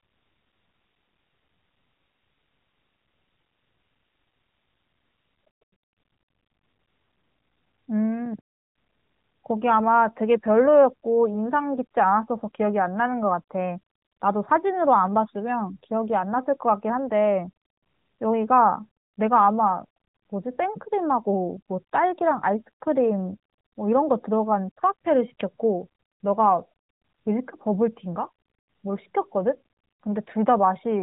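No technical faults are present.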